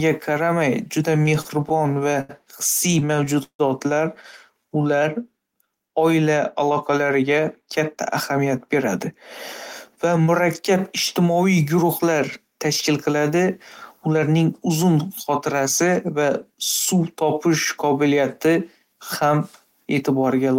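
Repeated stalls (stutter) at 1.17–2.31 s and 2.91–3.61 s: late packets drained the jitter buffer, and the receiver stretched the last sound to fill. The first span has 12 brief stalls, the longest 81 ms. The second has six, one reaching 161 ms and fading, so the speech drags haltingly.

Jitter buffer speed-up at 6.70–8.89 s (107% speed, roughly 150 ms removed), 10.05–10.27 s (113%) and 17.87–18.55 s (106%): with excess audio queued, the receiver cut out short pitch-period slices, so the speech sounds hurried at unchanged pitch.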